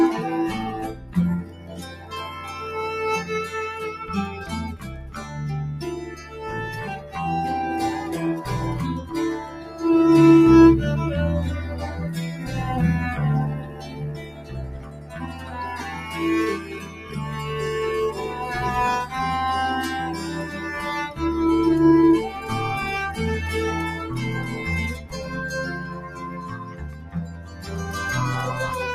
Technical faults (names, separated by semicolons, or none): noise suppressor applied to music or sounds; sound cut by the noise suppressor